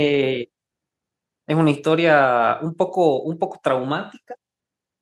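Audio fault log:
No audible faults found.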